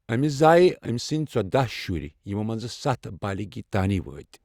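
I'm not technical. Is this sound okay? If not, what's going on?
Yes, this speech sounds fine; nothing is wrong.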